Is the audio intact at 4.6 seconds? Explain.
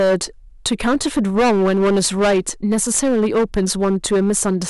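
No. At 4.6 seconds the speech is hard clipped, as it is for the whole clip. The level is driven about 14 dB past what the signal path can carry, so a sizeable share of samples, roughly one in seven, is sliced flat at the ceiling. On a waveform the peaks appear as squared-off plateaus. On a spectrogram, harmonic smear climbs high above the speech bands on each loud syllable. It is heard as harsh fuzz on every louder sound.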